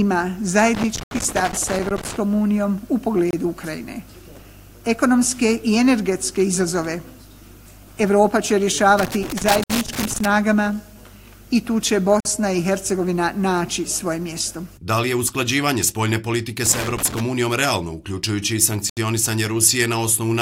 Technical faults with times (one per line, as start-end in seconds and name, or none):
0.75-2.17 loose connector crackle
1.03-1.11 Bluetooth stall
3.31-3.33 Bluetooth stall
8.99-10.25 loose connector crackle
9.64-9.70 Bluetooth stall
12.20-12.25 Bluetooth stall
16.66-17.20 loose connector crackle
18.90-18.97 Bluetooth stall